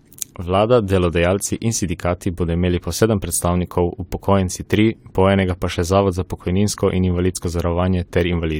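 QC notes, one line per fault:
7.44 s, overlap between stream segments: a tiny skip right after "zavod za pokojninsko in". Two stream segments carried overlapping time stamps, so the player trimmed about 18 ms of audio that was never duplicated, and the waveform jumps across the gap.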